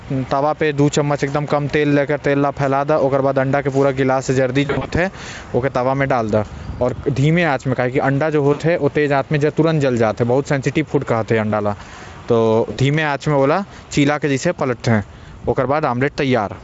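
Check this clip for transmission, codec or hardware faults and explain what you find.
Three short bursts of VoIP packet loss concealed by the speech codec occur, at 4.65 to 4.91 s, 8.53 to 8.63 s and 12.71 to 12.79 s. The first scatters about 160 ms of loss over 240 ms, with the longest run 60 ms. The other two each lose 60 ms. The decoder bridges each gap by repeating its last pitch and spectral shape at falling gain, so the speech smears into a buzzy tone or coloured noise that fades. A dropout would leave silence or a click instead. The underlying Speex coding is clean or at most faintly marked, which fits a high-rate mode.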